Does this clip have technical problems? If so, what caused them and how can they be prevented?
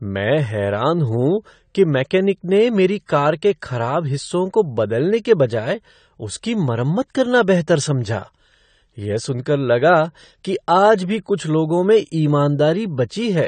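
Yes, there are two problems. Throughout the speech the top end stops dead at about 9 kHz, and what's left sounds dull and smeared, with a watery, fizzy edge on sibilants. That's most likely AAC compression, AAC-LC pushed hard, which fits a low bitrate around 32 kbps: with too few bits, the encoder drops the highs and quantises the rest coarsely. To avoid it, encode at a healthier bitrate or keep an uncompressed master.

At 11.37 s there's a pre-echo: a short smear of hiss, about 16 ms long, arrives just before a sharp attack and softens its edge. The codec spreads its quantisation noise across the whole transform block, so noise meant to hide under the loud onset also spills into the quiet stretch just ahead of it. A higher bitrate, or an encoder that switches to short blocks on transients, keeps that from happening.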